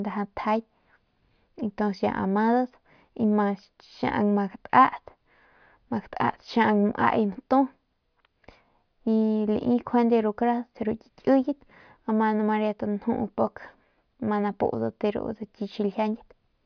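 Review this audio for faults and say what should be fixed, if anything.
No faults turn up in this audio, so nothing needs to be fixed.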